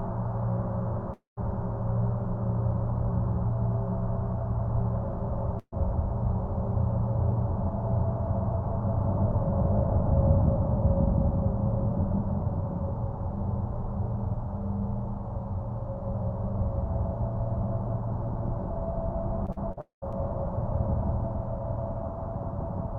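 At 1.13 s the sound breaks off for about a quarter of a second, until 1.39 s. The last sound is stretched into a fading buzz for roughly the first 80 ms, then about 150 ms of near silence follows, and the audio resumes with roughly 240 ms gone. This is likely a long network dropout. On a waveform the envelope tapers into a flat line. On a spectrogram the harmonics smear, fade, then leave a blank band.

From 5.59 to 5.74 s a burst of packet loss removes about 140 ms. The receiver holds and repeats the final sound for around 80 ms while turning it down, giving a brief droning or hissing tail. That tail ends in about 50 ms of silence before the audio picks up further along. A spectrogram shows frozen, horizontally streaked partials that dim into a short dark gap. The waveform shows a repetitive, decaying stretch, then a clean restart.

Between 19.46 and 20.15 s there is repeated packet loss, and the sound turns choppy and robotic. 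Four separate holes, none longer than about 45 ms, are each filled by echoing the preceding fragment. Concealment covers about 17% of this span, so the sound has a stuttering texture with small pieces missing. On a spectrogram this appears as several narrow vertical seams with smeared, copied texture on either side. The waveform shows small repeated cycles breaking up the envelope.

Inside that stretch, from 19.81 to 20.04 s, a second long network dropout is likely. About 220 ms goes missing. A brief decaying buzz gives way to roughly 130 ms of silence, producing the deepest gap in the choppy passage, a plainly visible blank column in the spectrogram.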